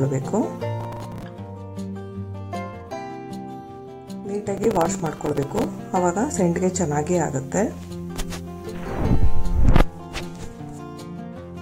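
Two bursts of processor overload crackle hit this audio, from 0.80 to 1.23 s and from 4.58 to 5.64 s. The processor kept missing its deadlines on buffers of around 5 ms, a dozen or so in the first burst and several dozen in the second, replaying stale audio each time, so you get that gritty tearing until the load eases. Inside the second burst, at 5.29 to 5.34 s, there's also a short blip from damaged data in a compressed stream, where the decoder lost sync on bad frames and skipped ahead to the next header.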